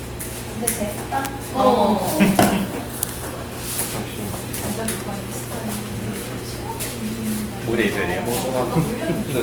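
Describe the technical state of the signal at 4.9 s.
At 4.9 s the signal carries sample clock jitter. It runs through the whole clip, not just this moment. The converter's clock wanders, so each sample is taken a little early or late. Here the timing error is a few microseconds. Where the waveform moves fast, that small shift becomes a bigger amplitude error. The result is a hiss and roughness sitting roughly 20 dB under the sound. It swells on loud and bright passages and drops away in quiet gaps.

The sound is also plainly damaged by compression, likely Opus in its music mode. This too lasts the whole clip. The encoder keeps each band's energy but has too few bits to describe the detail. It fills the gaps with folded or noise-like content. Tones therefore turn grainy and rough rather than swirly. The bandwidth stays full, reaching about 20 kHz. The damage level fits a low bitrate near 24 kbps.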